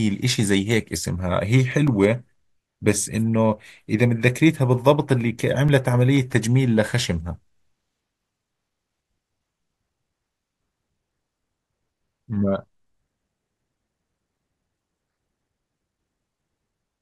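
CD scratch ticks appear from 1.24 to 2.36 s and again from 4.88 to 6.48 s. Each is a steady run of tiny dropouts, each only a few milliseconds, about seven per second. That spacing follows the disc's rotation, where unrecoverable data is patched over, unlike random clicks.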